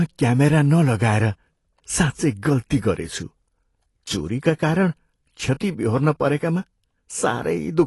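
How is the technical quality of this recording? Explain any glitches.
The recording has plainly audible codec damage from start to finish. Throughout, likely AAC compression at a low bitrate, consistent with about 32 kbps, cuts everything above 11.5 kHz and coarsely quantises the spectrum, leaving the speech dull, smeared and fizzy.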